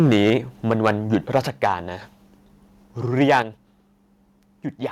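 From 0.0 to 0.36 s the input level was likely set too high, a microphone overload driving peaks about 5 dB past the converter's ceiling. A fair share of the loudest speech has its tops sheared off, giving a harsh, crackling edge. At 0.3 s the microphone volume was likely stepped down by about 2 dB, so voice and background drop together in one abrupt step. The pattern repeats. Overload of about 7 dB, likely from the same hot gain, distorts the loudest syllables from 0.7 to 1.67 s, with another likely step down of about 4 dB at 1.47 s. A likely overload of about 6 dB crackles from 3.21 to 3.39 s. A likely cut of about 6 dB follows at 3.42 s, the largest sudden level drop in the clip.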